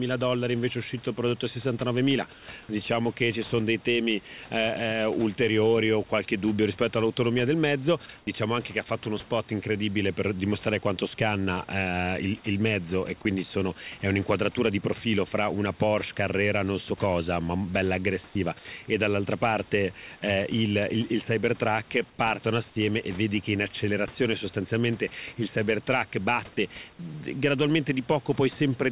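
A speech recording carried over a narrowband call path with nothing above 4 kHz, consistent with G.711 A-law. It has comfort noise in place of the background at 2.33–2.48 s, 8.18–8.27 s and 22.1–22.19 s. In these stretches the room noise turns into a smooth, featureless hiss about 5, 7 and 3 dB quieter, likely because discontinuous transmission synthesised filler noise during pauses. Unlike a dropout, the background never vanishes. A block of digital silence at 8.84–8.86 s is about 21 ms of silence, which fits an unfilled 1024-sample buffer. It cuts in and out abruptly.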